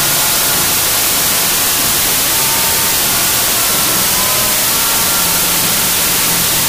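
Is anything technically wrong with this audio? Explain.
Yes. Throughout, a wrong sample width: 32-bit samples appear read as 16-bit, splitting each into two values, so loud noise buries sound playing at half speed, an octave low.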